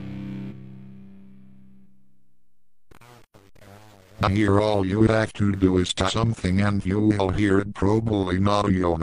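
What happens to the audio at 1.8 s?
Damaged data in a compressed stream, from 1.81 to 1.85 s: corrupted bytes make the decoder misread frames and lose sync, producing a brief chirp or squawk.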